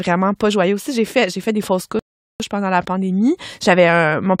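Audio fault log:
1.99 to 2.40 s, rebuffering stall: the speech cuts to silence right after "fait fait des fausses" and stays silent for about 0.41 s, then picks up with "pendant la pandémie" exactly where it left off. The player ran through its downloaded audio and had to wait for more data before continuing. Since playback pauses instead of skipping, no speech is missing, but the gap adds 407 ms to the clip's running time and breaks the rhythm of the phrase.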